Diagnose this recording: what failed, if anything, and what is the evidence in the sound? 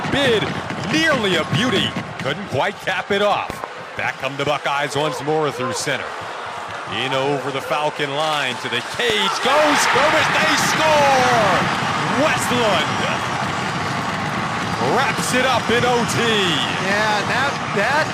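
Loud pops jump out above the sound: a double pop at 3.50–3.66 s and a stronger single one at 9.10–9.12 s. Likely an analogue wiring glitch, such as a voltage step from a plug or switch.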